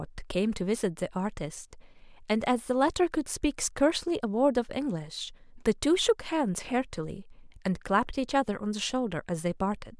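No technical faults can be heard anywhere in the speech.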